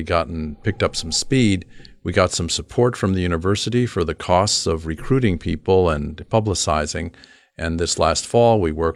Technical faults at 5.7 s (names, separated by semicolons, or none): none